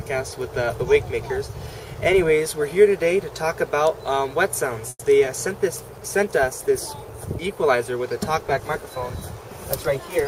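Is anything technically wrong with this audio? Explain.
Yes, there are three faults close together.

Call audio freeze at 4.89 to 5.01 s: the sound is stretched into a fading buzz with a brief silence, likely because delayed packets emptied the jitter buffer. It then resumes intact, about 100 ms later.

Short concealed packet loss at 5.25 to 5.28 s: about 20 ms of audio never reached the decoder, and the receiver's brief extrapolation leaves a quick smear.

Call bitrate drop from 5.5 to 7.98 s: the encoder fell from 64 to 24 kbps, bottoming out for about 1.2 s. The audio is coded more coarsely and sounds rougher and more watery until the rate recovers.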